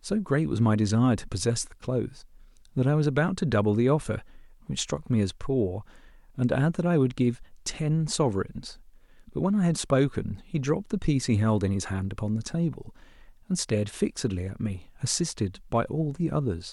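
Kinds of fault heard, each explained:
Nothing stood out on listening to this speech recording.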